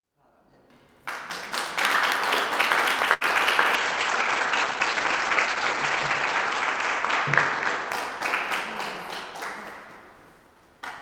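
This recording of everyday sounds has two faults. A late packet emptied the jitter buffer at 3.13 to 3.24 s, causing a short stall from a late packet: about 76 ms is held and stretched, with nothing lost but a lasting added delay. From 3.79 to 8.13 s, a call bitrate drop cut the encoder from 64 to 14 kbps and bandwidth from 20 kHz to 8 kHz, leaving the sound rough and muffled, worst for about 2.5 s.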